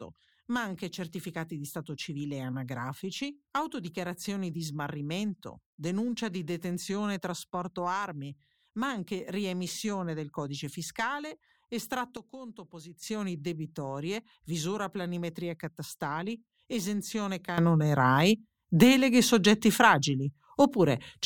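At 12.17 s the speech and the background noise drop together by about 10 dB in a sudden gain jump, then snap back up at 13.03 s. At 17.58 s there's a second jump, this time up by about 12 dB, and it holds to the end. Both look like a digital gain setting that was likely switched instantly rather than ramped, so the level steps from one sample to the next.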